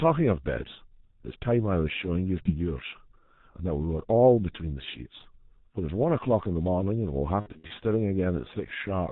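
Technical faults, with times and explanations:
throughout: G.723.1 codec. The speech has been squeezed through an early internet-telephony codec working in 30 ms frames at a very low rate, which fits about 6.3 kbit/s. Nothing above 4 kHz survives, and the voice model is updated only slowly, so the damage is heavy: the speech is muffled and hoarse, and consonants smear into one another instead of starting and stopping cleanly.
2.43 to 2.51 s: VoIP packet loss concealed by the speech codec. A single gap of about 30 ms, consistent with one lost frame, was filled by the decoder repeating its last pitch and filter at falling gain. The result is a brief stretched blip of buzzy tone or coloured noise, and because each following frame builds on that guessed state, the speech stays weak or distorted for a short stretch after real data returns.
7.40 to 7.73 s: VoIP packet loss concealed by the speech codec. 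Here losses are scattered across about 300 ms, totalling roughly 180 ms with the longest unbroken gap about 60 ms, which suggests around six dropped frames. The decoder keeps extrapolating through each hole, so the speech repeatedly turns into a fading tonal buzz or coloured noise, and the voice stays weak or distorted after each gap.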